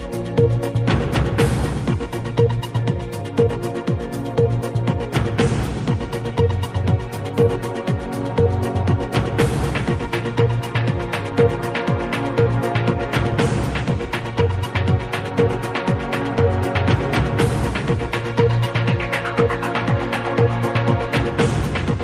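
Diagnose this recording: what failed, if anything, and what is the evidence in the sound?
No stage of the chain shows a failure: the signal stays continuous and stable from its first sample to its last, with nothing that points to a break in the wiring, conversion, processing, transmission, storage or playback path.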